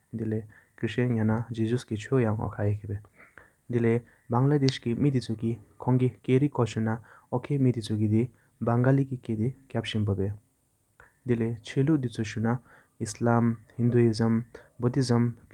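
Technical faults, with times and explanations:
Throughout: clock drift between sender and receiver. The sending side's clock runs fast, by about four percent. Audio keeps arriving a little quicker than the receiver plays it out, so its jitter buffer steadily fills and has to be trimmed. The result is a chain of tiny timing hiccups at uneven spacing rather than one dropout or a steady pitch change. What separates this from packet loss is that nothing goes silent and no gaps open; the stream is only being nudged back into step.
0.05 to 15.50 s: repeated timing corrections. Across nearly the whole of the speech the receiver keeps removing short slivers of sound to hold playback level with the faster sender, netting out to a 103 percent pace. Every edit runs the same way, shortening rather than repeating, and each is small, so if heard at all they come through as faint stumbles and a slightly restless tempo. 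Unlike a simple speed-up, the pitch stays put and the unevenness lies in the rhythm alone.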